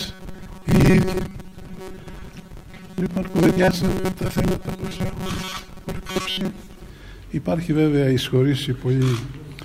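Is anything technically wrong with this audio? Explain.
Yes. From 0.01 s to 6.90 s the audio has a robotic sound from repeated short buffers. A rigid, metallic buzz at 188 Hz sits over everything while the underlying sound stays only roughly traceable. The likely cause is audio arriving too slowly, so playback fills each gap by looping a snippet of about 5.3 ms. That snippet length sets the buzz pitch, and roughly half the material is repeats rather than real audio. A spectrogram would show evenly spaced horizontal lines at multiples of 188 Hz, and the waveform would show identical short cycles copied back to back.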